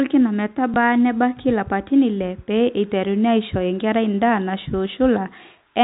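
At 0.74 to 0.76 s a small blip breaks into the speech: a 20 ms stretch plays twice. This is packet loss with the last packet repeated. What sounds like a single lost 20 ms packet was covered by replaying the previous one. Through the G.711 telephone coding, the audio stays band-limited to 4 kHz.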